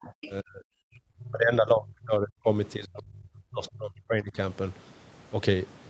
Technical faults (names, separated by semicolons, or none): speech suppressed in double talk; other side's voice leaking through